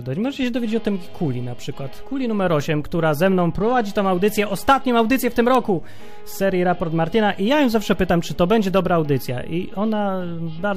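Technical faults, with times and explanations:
0.43 s, DC step: the waveform's zero line suddenly shifts to an offset of about -30 dBFS and holds there to the end. That abrupt jump in the baseline comes through as one low thump, while the sound itself carries on unchanged.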